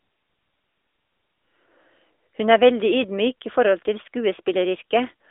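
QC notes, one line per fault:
Throughout, AMR narrowband mobile codec: buzzy, synthetic speech fitting a 10.2 kbps mode; spectrogram shows energy only within 300 Hz to 3.6 kHz, empty above 3.8 kHz.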